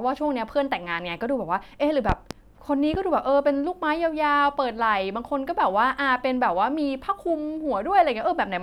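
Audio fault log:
2.09–2.34 s and 2.94–2.98 s: loud pop. A double pop, then a single one, sit about 15 dB and 10 dB above the speech. Likely a sudden voltage spike.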